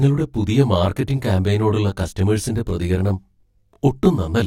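Throughout the speech, channel delay (comb filtering) is present: one channel trails the other by around 20 ms, and summing them to mono cancels shared content at regularly spaced frequencies from near 20 Hz upward. It sounds rough and slightly doubled, and a spectrogram shows fixed, closely spaced horizontal notch stripes.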